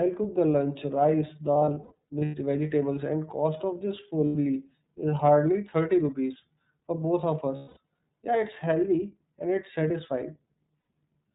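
iLBC codec, throughout: the speech passes through a narrowband VoIP codec, with a bitrate that fits iLBC's 13.33 kbps mode and 30 ms frames. Nothing above 4 kHz survives, and the plainly audible coding leaves the speech clear but rough and synthetic.

Lost iLBC frames, at 1.53 to 2.35 s, 4.25 to 4.35 s, 7.55 to 7.78 s and 10.86 to 10.89 s: the decoder fills missing packets by repeating the last pitch cycle mixed with noise, heard as a held, buzzy vowel. The first stretch scatters about 420 ms of loss over 810 ms, with runs up to about a tenth of a second. Each frame decodes independently, so the speech recovers almost at once after every gap.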